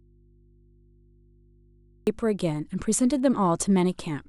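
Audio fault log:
0.00–2.07 s, audio dropout to a faint residue: the speech is already gone when the clip starts, leaving only mains hum about 35 dB under the normal level, then it snaps back abruptly. It's likely a lost connection upstream while the input stayed live.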